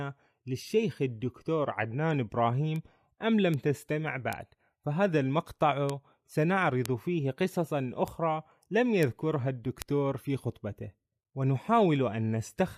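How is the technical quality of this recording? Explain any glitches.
The speech is marred by eight sharp ticks at 2.76, 3.54, 4.33, 5.90, 6.86, 8.08, 9.03 and 9.82 s. Each is a bit error spike, peaking at about −22 to −10 dBFS. A single flipped bit in storage or on a digital link throws one to three consecutive samples off by a power of two before they snap back, producing a broadband click unrelated to the speech.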